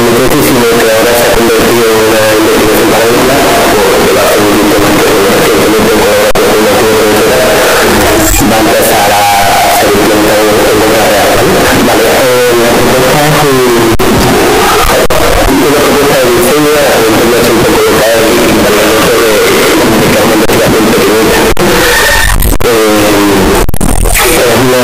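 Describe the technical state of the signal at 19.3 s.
Float read as integer is present at 19.3 s, as it is across the whole clip. The likely cause is samples stored as 32-bit float being read back as 32-bit integers, so the sign and exponent bits, not the intended amplitude, set each value. The waveform becomes almost square and sits at a nearly constant high level regardless of how quiet the source was. The result is very loud and harsh, with background noise brought up to the same level as the main sound.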